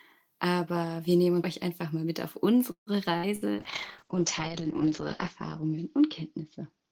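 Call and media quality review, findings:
Call audio freeze, 2.71 to 2.90 s: held-over sound fading into about 110 ms of silence, then speech resumes where it left off. Nothing lost, but roughly 150 ms of extra delay added.
Likely cause: packets stalled in transit and the jitter buffer ran dry. The receiver stretched the last audio to cover the wait, then picked up intact once the packets arrived.

Burst of packet loss, 3.17 to 3.26 s: short held buzz or fading hiss, then a jump ahead. About 60 ms of speech gone.
Burst of packet loss, 3.36 to 3.44 s: same again, roughly 60 ms skipped. In both cases the packets were lost or arrived too late to play, and concealment dragged out and faded the last sound before playback resumed further along.

Call bitrate drop, 3.55 s to the end: speech turns rough and muffled. The encoder falls from 32 kbps to 7 kbps and sits at the floor for about 1.5 s. 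Audio bandwidth narrows from 20 kHz to 8 kHz.
The bandwidth estimate collapsed, so Opus was forced into coarse coding and dropped the top end. The quality stays degraded for the rest of the clip.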